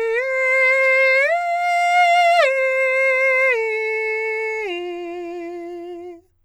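The music has no audible technical faults. There is no event here that needs a time marked against it.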